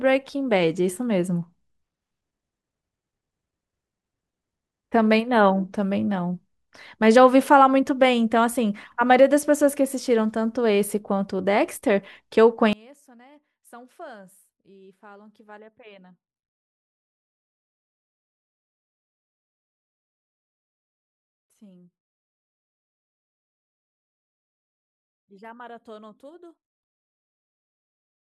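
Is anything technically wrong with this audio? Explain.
Yes. One channel inverted, from 12.73 s to the end: the speech drops by about 27 dB and turns faint. The likely cause is reversed polarity on one stereo channel, so the centred voice cancels when the channels are summed, leaving only their faint difference.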